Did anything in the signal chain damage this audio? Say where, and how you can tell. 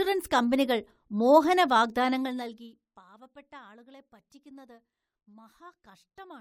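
No, nothing in the signal chain damaged this speech audio; no stage left any audible trace of harm.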